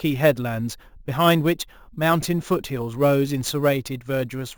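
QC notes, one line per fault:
throughout: imaging from sample-and-hold upsampling, with an unsmoothed step that fits a 16 kHz source. A metallic fizz about 20 dB down fills 8 to 16 kHz, swelling with the speech and moving against its pitch, unlike steady hiss.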